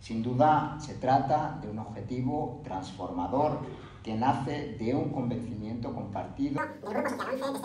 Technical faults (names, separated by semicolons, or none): wrong sample rate